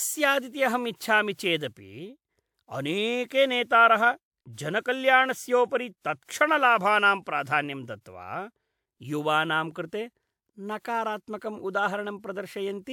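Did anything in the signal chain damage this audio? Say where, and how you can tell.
Yes, at the codec stage: generation loss throughout the speech. It sounds swirly and hollow, with blurred consonant attacks. The likely cause is about three WMA 1 passes, each requantising on a shifted frame grid. A spectrogram shows compounding holes and smeared patches below 20.1 kHz.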